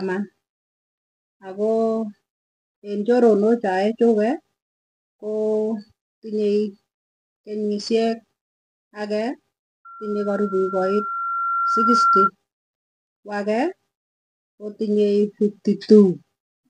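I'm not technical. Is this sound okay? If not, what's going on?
No. Loudspeaker feedback squeal, 9.85 to 12.30 s: the microphone picks up its own loudspeaker, so a 1.4 kHz tone swells over about two seconds.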